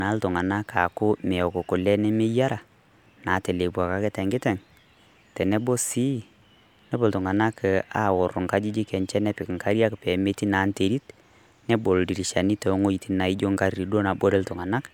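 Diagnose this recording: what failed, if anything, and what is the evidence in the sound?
Nothing in the signal chain points to a failure: the speech runs continuously with no dropouts, clicks, level jumps, distortion or timing disturbances that would implicate any stage from capture to playback.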